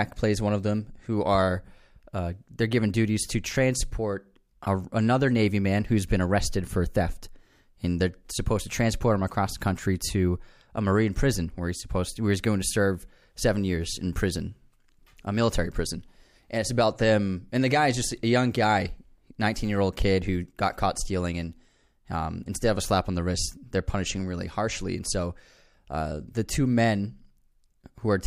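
No technical faults are audible.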